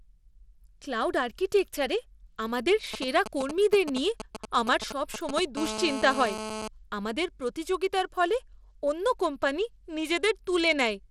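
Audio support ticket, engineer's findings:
Gritty, coarse speech throughout, treble cut above 16.8 kHz with grainy noise riding on it; likely Bluetooth SBC compression on a starved bit pool, consistent with roughly 96 kbps.

Galloping dit-dit-dit ticks and short 217 Hz buzzes at 2.94–5.40 s, right after "ক্লাউড আর্কিটেকচারে আমাদের", about 10 dB under speech. GSM signalling bursts from a nearby 2G phone, rectified in the audio circuit.

Hard, raspy 217 Hz buzz with many harmonics at 5.57–6.68 s, just before "আমাদের প্রতিযোগিতার ফলে অন্য", about 8 dB under speech. GSM phone buzz: a nearby 2G phone in a call, its transmit pulses rectified in the audio circuit.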